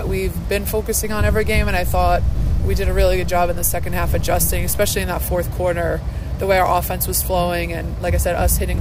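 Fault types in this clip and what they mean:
DC step: The waveform's zero line jumps by about -24 dBFS at 1.05 s and holds until 4.90 s. Each shift gives a low thump. The sound continues unchanged.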